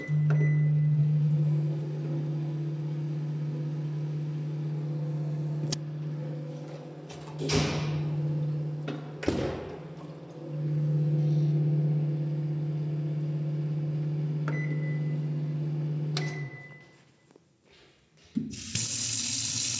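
Nothing technical stood out on listening to this recording of sounds.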